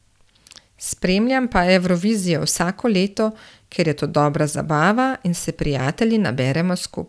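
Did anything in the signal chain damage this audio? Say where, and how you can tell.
No, nothing damaged this audio.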